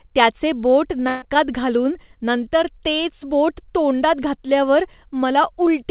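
At 1.08 s, just after "त्याचे बोट", a burst of packet loss drops about 140 ms of speech, to 1.24 s. The receiver fills 136 ms by stretching and fading the last sound, leaving a smeared tail rather than silence, then speech resumes with that stretch missing.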